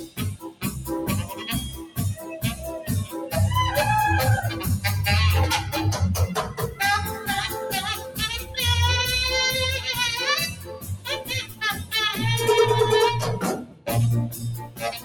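A speech-tuned noise suppressor is applied to music or sounds throughout. It reads sustained content as noise, so the level swings by roughly 15 dB and the sound pumps and thins as held material is pulled down while attacks pass.

Sounds cut by the noise suppressor sink further at 0.0 to 0.64 s (about 15 dB), 1.78 to 1.98 s (about 13 dB), 6.48 to 6.8 s (about 10 dB), 7.97 to 8.19 s (about 9 dB), 8.41 to 8.57 s (about 8 dB), 10.49 to 11.93 s (about 15 dB), 13.59 to 13.88 s (about 15 dB) and 14.27 to 15.04 s (about 15 dB). In each span, steady or decaying sound is attenuated and tails are clipped short.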